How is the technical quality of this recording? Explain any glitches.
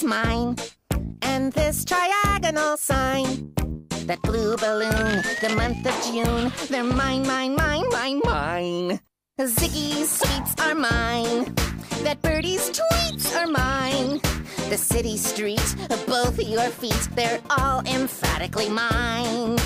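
Nothing glitchy turns up anywhere here, so there's really nothing to explain on the technical side.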